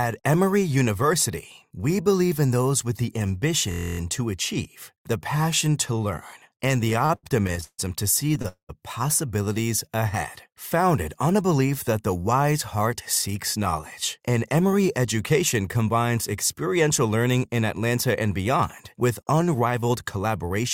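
From 3.72 to 3.99 s a system hang loop appears: the driver stalled while the hardware kept replaying one 23.2 ms piece of its ring buffer, which fits a 1024-sample buffer. It repeats 12 times, giving a rapid stutter near 43 Hz.

Between 6.85 and 8.46 s come repeated stalls (stutter). Packets kept arriving late, so the jitter buffer ran dry 13 times. The receiver stretched the last sound each time, filling 369 ms in total and 147 ms at most, so the audio drags and stutters without losing anything.

At 8.48 to 8.71 s the sound stops moving forward and is held for 208 ms, decaying into roughly 100 ms of silence before it resumes where it left off. This is likely a call audio freeze, with delayed packets emptying the jitter buffer.

Jitter buffer speed-up follows at 11.27 to 12.16 s, 13.28 to 14.21 s, and 19.24 s to the end. The receiver trimmed pitch-period slices to shed excess buffered delay, removing about 70 ms and 50 ms in the first two spans. 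Playback runs 106, 105 and 108 percent fast at unchanged pitch, sounding hurried.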